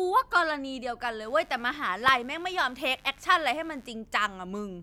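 A speech clip with mains buzz from 1.2 to 3.91 s: a raspy 50 Hz harmonic series, roughly 35 dB below the speech, from switching spikes leaking in through poor shielding or a dimmer.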